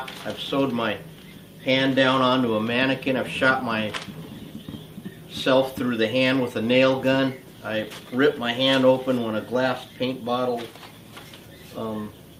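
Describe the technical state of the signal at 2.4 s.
Around 2.4 s the signal is intact, with no dropout, distortion, glitch or other fault audible at that point.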